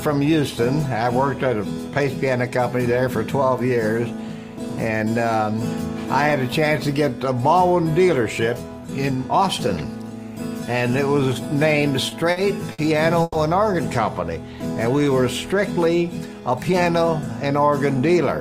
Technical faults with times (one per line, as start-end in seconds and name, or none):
12.09-12.38 short stall from a late packet
12.72-12.80 short stall from a late packet
13.22-13.36 call audio freeze
16.33-16.86 jitter buffer speed-up